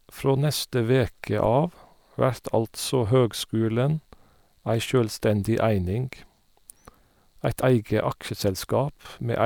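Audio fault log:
1.45 s and 7.59–7.64 s, damaged data in a compressed stream: a brief blip just after "neste veke", then a much longer break of about 44 ms later in the speech. Part of the compressed stream at each point is corrupted, so the decoder misreads those frames and briefly produces garbage. It loses sync and must hunt for the next valid frame header before normal decoding resumes, which is why each break is short and abrupt.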